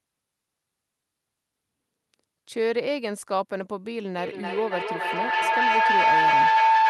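From 4.18 s to the end, a feedback howl builds near 1 kHz, with repeats about every 300 ms. The mic-to-speaker loop gains level each trip, peaking about 7 dB above the speech.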